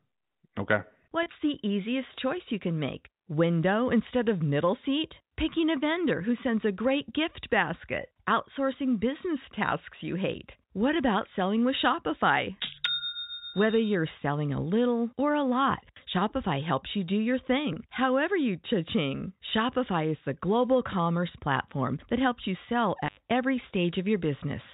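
At 1.23 s, just before "the easiest choice you", and again at 17.73 s, between "helps you do your" and "however you", the speech briefly holds on a slightly buzzy, sustained tone for about 30 ms. This is packet loss with pitch repetition: each gap fits a single lost packet, bridged by repeating the last pitch period. At 23.05 s, right after "helps you sell", the sound cuts out for about 88 ms with crackle at both edges. That is an intermittent contact, a loose connection opening momentarily, heard over the band-limited G.711 telephone line.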